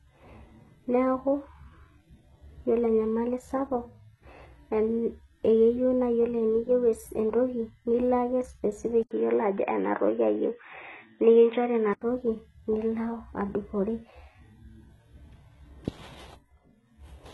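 From the start, the treble sounds gritty and metallic, with s sounds turning lispy and nothing above 11.8 kHz. This is likely heavy HE-AAC compression at a low bitrate, around 16 kbps: the highs are rebuilt from copied lower bands rather than simply cut away, so they stay bright but harmonically wrong.

From 9.03 to 12.01 s, the sound turns dull and boxy, with nothing above 3.8 kHz. It begins with a gap of about 80 ms, and a faint new noise floor about 50 dB below the signal comes in, while the level stays about the same. The likely cause is the input switching to a poorer device. Unlike a codec change, the bandwidth drops abruptly after a short silence, brings its own background noise, and recovers just as suddenly at 12.01 s.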